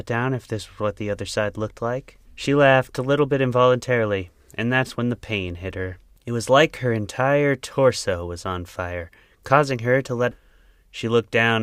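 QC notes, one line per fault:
10.31–10.36 s, stream segment skipped: Right after "causing her to let", the speech jumps abruptly ahead with a short blip. The likely cause is a stream segment that failed to load, so the player skipped to the next one and dropped that stretch of programme.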